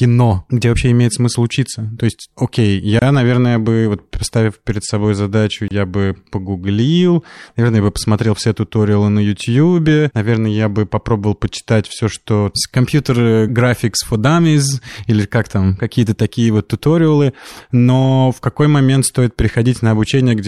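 A brief dropout of about 27 ms cuts the speech at 2.99 s, after "есть окей", and again at 5.68 s, after "поставив перед собой задачу", each with softened edges. These are gaps at joins of encoded pieces: separately encoded segments were spliced without trimming encoder delay and padding.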